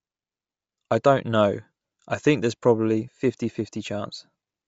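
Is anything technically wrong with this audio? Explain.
Yes. Bluetooth LC3 compression runs throughout: the speech has a plainly audible breathy, grainy edge and nothing above 7.7 kHz, which fits LC3 at 32 kbps with 10 ms frames. The likely cause is this transform codec zeroing much of the upper spectrum and filling it with noise.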